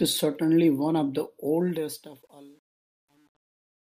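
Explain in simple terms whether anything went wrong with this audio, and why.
Right after "certainly one of the", at 1.6 s, the fade-out gets truncation distortion: too few volume steps, so from 2.09 s it turns gritty.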